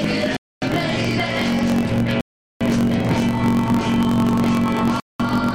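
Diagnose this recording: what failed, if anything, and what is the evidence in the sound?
A block size mismatch (truncated) sits at the driver or buffer stage and runs through the whole recording. A steady buzz at 45.9 Hz marks each block boundary, and the audio plays 1.07 times fast while its pitch stays about normal. That fits one stage writing 1024-sample blocks while the next reads fewer and discards each block's tail. Resampling or a clock error would shift pitch along with speed, and an underrun would click irregularly instead of buzzing at a fixed rate.

Three gaps of silence fall at 0.37–0.62 s, 2.21–2.61 s and 5.00–5.20 s, lasting about 271 ms, 425 ms and 210 ms. Each time the sound stops cleanly and resumes where it broke off. This is likely a Bluetooth stall at the wireless playback link: interference delayed packets, the headphone buffer emptied, and output paused until retransmissions arrived. 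A lossy network dropout would conceal or skip material rather than pause and resume.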